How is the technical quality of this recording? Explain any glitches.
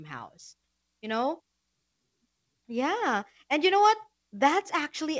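Nothing stood out on listening to this speech recording, so there are no glitches to explain, and the only trace of the call path is that the audio stops at 8 kHz, which fits a G.722 wideband codec.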